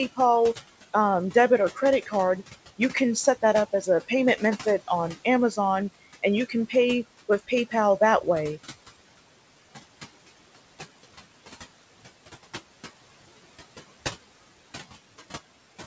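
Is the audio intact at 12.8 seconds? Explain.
No. At 12.8 s the speech carries noise suppressor artifacts, present throughout the clip rather than at this moment alone. The suppressor estimates the steady room noise, which sits about 18 dB below the speech, and pulls those frequency bands down by about 18 dB frame by frame. The background therefore dips in the gaps and returns under the speech.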